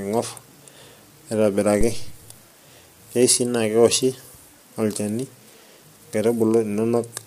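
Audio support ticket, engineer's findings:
Low-delay AAC compression, throughout: speech rough and grainy, noise filling the gaps between harmonics, top band dull or synthetic. Likely AAC-ELD, whose short frames blur pitch harmonics. Damage plainly audible, fitting a low bitrate around 32 kbps.

Phantom power thump, 1.81 to 2.26 s: deep low-frequency thump, decaying in about 0.1 s. Supply switched on or off on the live input. The voltage step passes through the coupling capacitors into the signal path.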